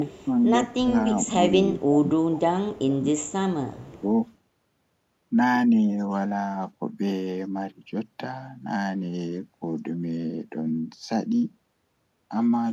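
A faint delayed copy of the speech, trailing by 228 ms and sitting roughly 30 to 35 dB below it, is heard from 0.00 to 0.25 s, 2.74 to 2.83 s and 3.82 to 4.02 s. This is likely an echo leak, where the far end's echo canceller let part of its loudspeaker pickup return down the line. Alongside these, the speech dips by around 20 dB at 0.77 to 0.95 s, 1.74 to 2.67 s, 2.85 to 3.39 s and 3.70 to 4.02 s, sounding as if it is ducked in pieces. That points to speech suppressed in double talk, with the canceller turning down the talker along with the echo while both sides spoke.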